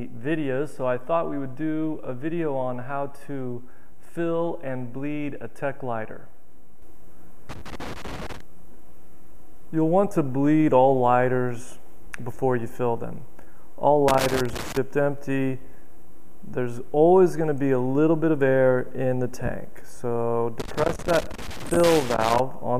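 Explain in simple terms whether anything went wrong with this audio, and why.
Three bursts of loose connector crackle interrupt the audio: from 7.49 to 8.41 s, from 14.08 to 14.77 s, and from 20.60 to 22.40 s, the last and longest lasting nearly two seconds. A worn or dirty plug or socket somewhere in the signal path was moving, so its contact kept connecting and disconnecting very quickly. Each break chops the sound into fragments, which is heard as an irregular, scratchy crackle.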